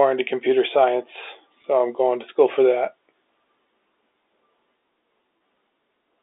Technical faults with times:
1.62-1.64 packet loss with pitch repetition
5.39 packet loss with pitch repetition

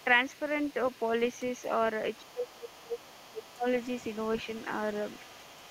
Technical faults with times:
0.00-5.71 other side's voice leaking through
2.21-3.65 speech suppressed in double talk

